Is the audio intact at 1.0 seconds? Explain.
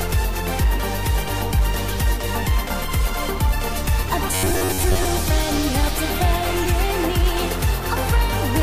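Yes, the audio is intact at 1.0 seconds, with no dropout, click, distortion or other fault audible at that point.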